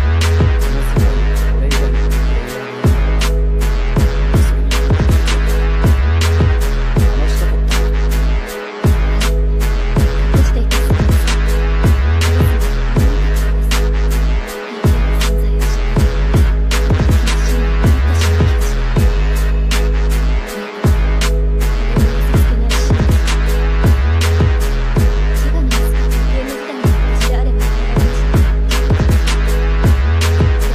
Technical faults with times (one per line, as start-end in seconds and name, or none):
none